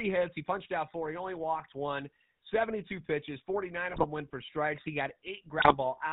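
A buzzy, gravelly roughness runs through the whole speech clip, with the top end gone and every sound rough-edged. That is the GSM full-rate codec, which fits the 13 kbps coder. It rebuilds the voice from a vocal-tract model fed by a sparse, regularly spaced pulse excitation, so fine detail turns to grit, and it passes nothing above 4 kHz. The damage is plainly audible from start to finish.

Three short bursts of squawking and gargling follow. The first is from 1.57 to 1.67 s. The second runs from 3.90 to 4.05 s, just before "went for strikes". The last is from 5.58 to 5.74 s. These are GSM bit errors. Flipped bits reach the decoder and corrupt its filter, pitch or gain values, so each affected frame comes out with a bent spectrum or a jump in level. The pattern points to several consecutive frames hit in each burst, at an error rate of a few percent.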